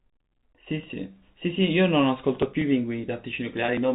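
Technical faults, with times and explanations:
3.66–3.68 s, packet loss with pitch repetition: about 20 ms of audio went missing in transit, which fits a single lost packet. The receiver filled the hole by repeating the last pitch period from before the loss. Because the gap is so brief, the repetition has no time to fade to silence. Instead the sound briefly holds steady with a slightly buzzy, frozen quality, within a telephone band that stops at 4 kHz.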